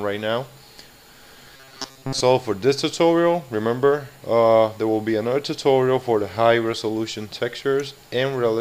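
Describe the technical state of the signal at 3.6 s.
At 3.6 s the signal is intact, with no dropout, distortion or other fault at that point.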